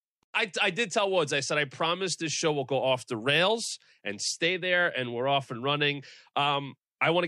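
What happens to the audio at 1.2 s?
Nothing goes wrong at 1.2 s: the speech carries on intact through that moment, with no dropout, click, distortion or other audible fault.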